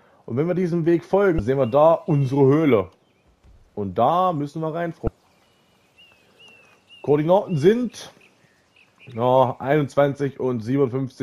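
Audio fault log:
1.36–1.40 s and 5.04–5.08 s, damaged data in a compressed stream: corrupted bytes make the decoder misread frames and lose sync, producing a brief glitch lasting about 34 ms each time.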